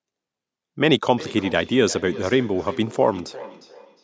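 From 1.18 s to the end, the speech has a feedback echo between two devices: another device in the room replays the call and this microphone picks it up again. Each word returns roughly every 0.4 s at up to about 17 dB below the speech, as spaced repeats rather than a smooth reverberant tail.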